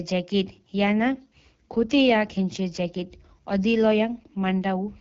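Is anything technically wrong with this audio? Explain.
Yes, the whole speech clip has been through the AMR wideband (HD Voice) codec, and the rough, raspy texture points to one of its lowest rates, around 8.85 kbit/s, starving the pulse-driven vocal model.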